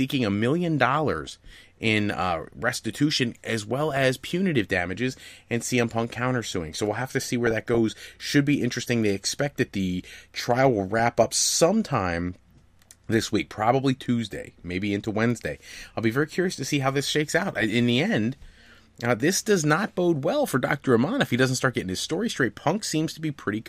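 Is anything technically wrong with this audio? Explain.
Yes. DAB burbling occurs five times: 1.27 to 1.56 s, after "a million" and before "in uh restitution as"; 3.90 to 4.04 s; 7.45 to 7.78 s, after "we'll have to see"; 10.87 to 11.26 s, after "that the trial will"; and 17.39 to 17.70 s. Weak reception lets a small fraction of bit errors slip past error correction. Corrupted samples give short blips of noise in single sub-bands, and corrupted scale factors make sub-bands jump in level for up to a frame, over the speech.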